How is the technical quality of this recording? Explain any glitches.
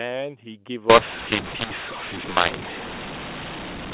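The recording has one serious fault: from 0.90 s to the end at 3.93 s, the telephone audio is decoded with the wrong G.711 law.

From 0.90 s onward, mu-law and A-law are mixed up. The speech was coded as mu-law but decoded as A-law. The two laws use different companding curves and bit conventions, so each 8-bit code maps to the wrong amplitude. Some levels come out too large, some too small, and near-zero codes land well above silence. The speech turns harsh and distorted, and the pauses fill with noise. The telephone band limit of 4 kHz, from the 8 kHz coding, is audible throughout the clip.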